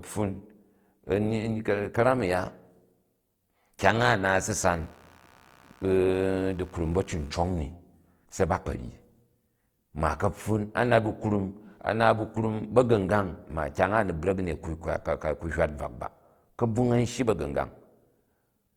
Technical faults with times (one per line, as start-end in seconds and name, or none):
0.00-18.76 Opus compression
4.71-7.29 computer activity noise